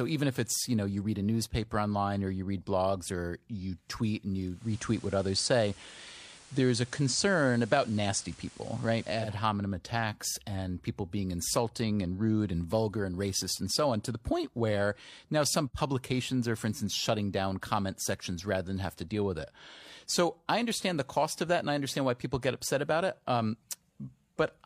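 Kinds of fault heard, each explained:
Digital radio blending to analogue: digital reception drops, so a 257 ms cross-fade to FM brings hiss about 25 dB below the signal and a level shift of about 2 dB.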